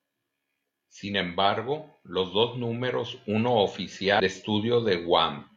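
Stream segment skipped at 4.16 to 4.20 s, right after "los dos números uno": the speech jumps abruptly ahead with a small blip, likely because one stream segment failed to load.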